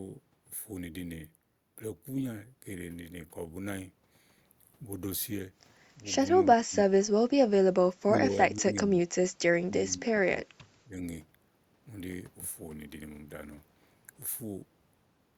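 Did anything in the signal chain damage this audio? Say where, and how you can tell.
Yes, call processing: speech ducks hard at 6.43–7.05, 7.87–9.14 and 9.6–11.04 s, likely speech suppressed in double talk as the echo canceller turns down its own talker along with the loudspeaker echo.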